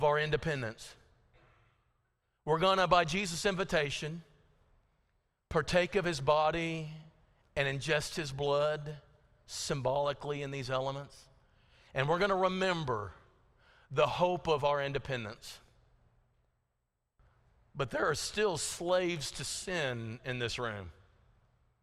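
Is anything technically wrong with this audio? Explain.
No, nothing technically wrong is audible here.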